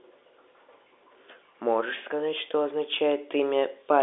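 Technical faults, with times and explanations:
No technical faults are audible.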